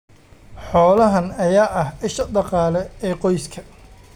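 Speech clip with two sharp, isolated clicks at 0.98 s and 2.21 s, the second just before "dhaqaale ee", likely dropped samples, each losing a fraction of a millisecond.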